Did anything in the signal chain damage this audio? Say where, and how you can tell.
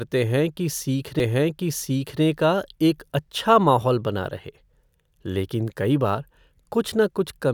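Yes. A CD skip at 1.19 s, in the playback stage, just before "का एक अच्छा माहौल": a tick and a mute of only a few milliseconds, then the speech resumes from elsewhere. The laser lost its track and jumped to another turn of the disc's spiral.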